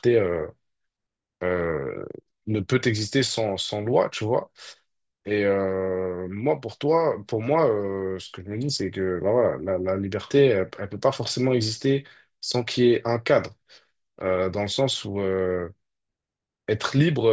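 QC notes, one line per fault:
No faults found in this speech clip. Nothing in the recording calls for a QC note.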